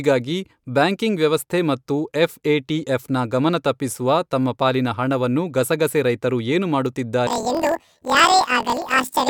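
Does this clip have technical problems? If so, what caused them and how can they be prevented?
Yes. From 7.27 s to the end at 9.29 s, the speech jumps an octave higher and takes on a rough, fluttering buzz at about 41.7 Hz. This is planar audio read as interleaved. The audio is stored in 24 ms blocks, with all left samples followed by all right samples, but it is read as alternating left-right pairs. Each block therefore plays its left half and then its right half at double speed, raising the pitch by 12 semitones while the overall pace holds. To prevent it, check the buffer's sample layout flag and convert planar data to interleaved before playback or encoding.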